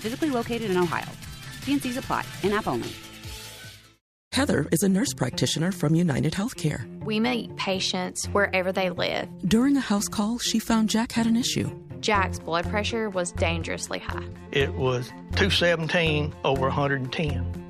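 Nothing stood out as a technical problem on listening to this audio.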